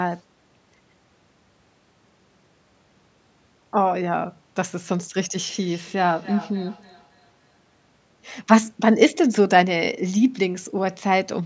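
From 5.49 to 7.95 s, feedback echo between two devices: the speech returns roughly every third of a second, about 19 dB down, thinning and ringing with each pass.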